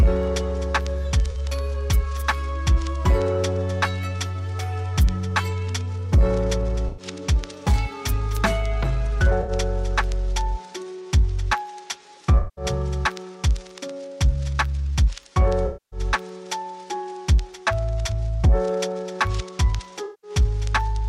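Six patches of AAC frame loss with concealment occur, at 1.30–1.37, 6.88–7.06, 9.41–9.51, 12.38–12.65, 15.66–16.00 and 20.04–20.31 s. Each time the decoder lost between about 43 and 256 ms of data and rebuilt it from the last good spectrum. The result is a smeared, noisy, phasey stretch, not a hard gap. Unlike a plain dropout, there is no abrupt silence at the edges. The longest losses, near 12.4, 15.7 and 20.0 s, sag in level before recovering.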